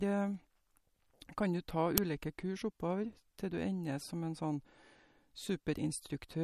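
MP3 compression runs through the whole speech clip, likely from encoding at a low bitrate, roughly 49 kbps judging by the damage. The encoder divides the signal into narrow frequency lines and spends bits only where its hearing model expects them to count. Here it has removed everything above about 15.3 kHz and let weaker lines drop in and out between frames, so the speech has a plainly audible watery, swirling quality and smeared edges.

An uninitialised buffer appears at 1.98 s. A block of memory went to the output before any audio had been written into it, so whatever values were left there were played as samples. It is heard as a very brief, loud crack lasting about 2.67 ms, which fits a 128-sample buffer. It cuts sharply across the compressed speech and then disappears.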